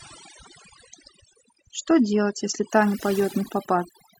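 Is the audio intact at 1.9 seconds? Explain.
No. At 1.9 seconds the speech sounds dull and muffled, with nothing above 9.6 kHz and coarse, smeared codec artefacts. This is an adaptive stream starting at a low bitrate, which lasts from 0.0 to 2.7 s. The player began on a cheap version of the stream so playback could start at once, and the sound is consistent with AAC at around 32 kbit/s. At 2.7 s it switches to a fuller version, about 96 kbit/s, and the treble returns abruptly with no gap.

The same moment also carries overdone noise removal, which runs through the whole clip. The background between sounds drops and breaks up into twinkling specks. A noise reducer set too aggressively is shutting down individual frequency bands whenever they come close to its noise estimate. The quieter parts of the voice fall into that range and get removed along with the noise, and the isolated bands that flicker on and off are what make the sparkle.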